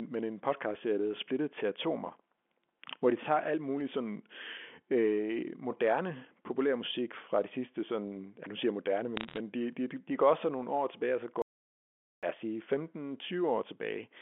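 A speech recording carried over a G.711 phone line, band-limited to telephone range. From 9.17 to 9.38 s, just after "nu siger jeg moderne", bit errors on a digital phone line cause sharp ticks and crackle. Scattered flipped bits, under one percent, corrupt single samples. At 11.42 s, after "år tilbage og så", an audio dropout to silence cuts the sound to silence for 0.81 s. It returns at "os sige". The likely cause is lost input, with silence written in its place.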